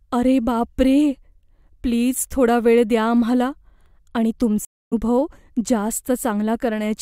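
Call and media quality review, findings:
Stream reconnect in the speech at 4.65 to 4.93 s: audio drops out for about 267 ms, then picks back up roughly 0.3 s further along, so a bit of speech is just gone. Looks like the player lost the connection, reconnected, and spun up a fresh decoder mid-stream, landing ahead the way a live feed does, with the first frame faded in.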